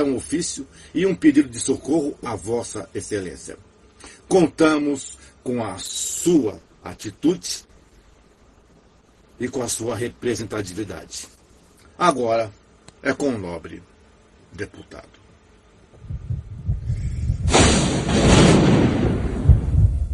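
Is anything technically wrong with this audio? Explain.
Yes. From 5.83 to 11.83 s the adaptive stream drops to a lower bitrate, as the player switches to a much leaner encoding, which fits a fall from about 64 kbit/s to about 12 kbit/s Opus. Codec artefacts rise, with an abrupt quality change and no gap.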